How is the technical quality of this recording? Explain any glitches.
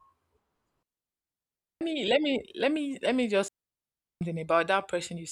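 The speech is interrupted twice by a digital wireless dropout. At 0.83 to 1.81 s, just before "me let", and 3.48 to 4.21 s, the receiver mutes on lost data, leaving clean near-silent gaps without noise bursts.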